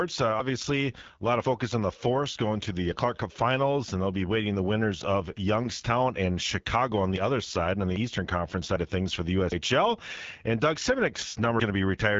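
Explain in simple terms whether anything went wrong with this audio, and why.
Rough, raspy speech with no crispness at the top from start to finish: the AMR wideband (HD Voice) codec, running at a low quality setting, nothing above 7.5 kHz.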